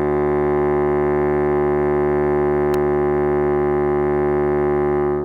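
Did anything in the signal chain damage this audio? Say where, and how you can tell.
Yes: an electrical switching spike at 2.74 s, a sharp snap peaking around -10 dBFS on top of the music. It was picked up in the analogue wiring, most likely from a nearby switch, motor or static discharge arcing briefly and coupling into the audio line.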